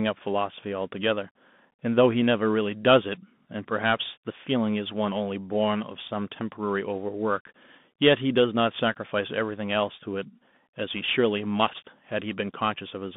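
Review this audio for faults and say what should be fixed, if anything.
Bluetooth CVSD headset codec damage runs throughout the speech, from start to finish. The band is squeezed to roughly 150 Hz to 3.6 kHz, so the audio sounds thin and telephone-like. CVSD codes each sample as a single up-or-down bit, consistent with a 64 kbps link, and its adaptive step can't keep pace with loud high-frequency energy. That leaves s sounds scratchy and distorted, with a granular hiss beneath the voice. To prevent this, record through a wired microphone or a wideband Bluetooth profile instead of the headset's hands-free mode.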